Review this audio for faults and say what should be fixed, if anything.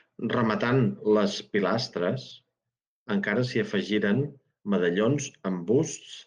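At 2.29 to 2.31 s the speech briefly turns rougher and grainier for about 20 ms, with no gap or dropout. This is a lost packet rebuilt from error correction. The sound fits a single lost 20 ms Opus packet. The following packet carried a low-bitrate copy of it, and the decoder played that coarser copy in its place. The call path caps the audio at about 12 kHz throughout. To prevent it, reduce packet loss on the network link.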